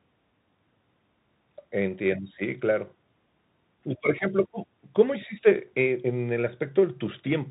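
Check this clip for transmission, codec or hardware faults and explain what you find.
The speech has passed through a Bluetooth CVSD headset codec for its whole length. It encodes one bit per step, which fits a 64 kbps stream, and removes everything above 4 kHz. S sounds scratch, and a granular hiss runs underneath.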